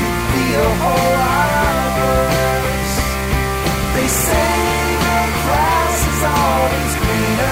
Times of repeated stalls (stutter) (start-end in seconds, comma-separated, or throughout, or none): none